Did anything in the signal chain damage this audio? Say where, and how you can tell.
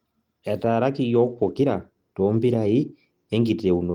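No, nothing in the signal chain damaged this audio.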